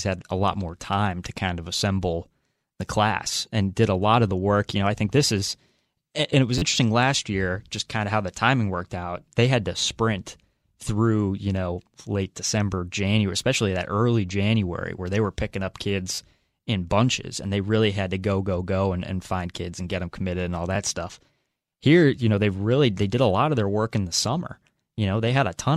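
Repeated buffers at 6.58–6.62 s, 16.15–16.18 s and 20.75 s: late audio made playback loop an 11.6 ms block, fitting a 512-sample buffer, heard as brief buzzy stutters.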